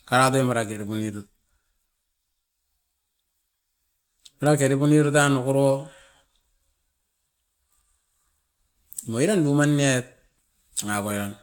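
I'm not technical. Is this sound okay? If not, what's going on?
Yes, it's fine; I listened all the way through and there's nothing technically wrong to hear anywhere in it.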